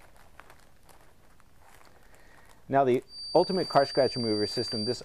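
At 3.05 s a feedback whistle appears and continues to the end of the clip, a thin, steady tone at 4.7 kHz sitting about 10 dB below the main sound and swelling and fading slowly in level. The likely cause is a loudspeaker-to-microphone loop running just at the edge of instability: the gain around the loop at 4.7 kHz is close enough to unity that this one frequency sustains itself without building into runaway howl.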